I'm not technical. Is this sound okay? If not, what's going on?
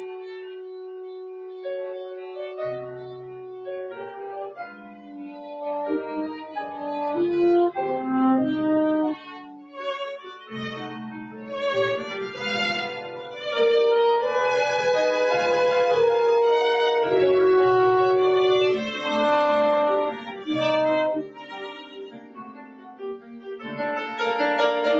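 No. A noise suppressor meant for speech was applied to this sound. It mistakes steady tones, ambience and tails for noise and turns them down. Sharp onsets still get through. Held parts sink, so the level keeps pumping and the sound thins out.

Some passages were cut by the noise suppressor. The sound dips clearly from the start to 5.6 s and again from 21.2 to 23.8 s. Shorter dips come at 6.3 to 6.8 s, 9.2 to 9.8 s, 11.2 to 11.5 s and 20.2 to 20.5 s.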